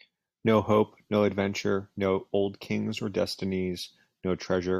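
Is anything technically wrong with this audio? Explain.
No, nothing technically wrong turns up here; this speech recording comes through without any audible problems at all.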